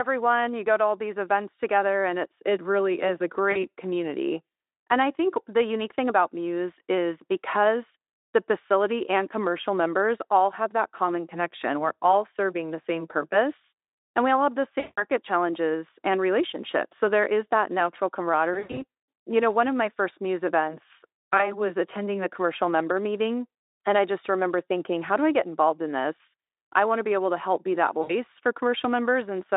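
Brief buzzy, smeared dropouts that fade and leave the speech weak for a moment occur at 3.51–3.65 s, 14.79–15.04 s, 18.53–18.83 s, 21.37–21.56 s and 28.01–28.12 s. This is VoIP packet loss concealed by the speech codec, which fits gaps of about 40, 180, 180 (scattered, longest run 100 ms), 20 and 80 ms of lost audio. Each time, the Speex decoder stretches its last pitch and filter state while lowering the gain.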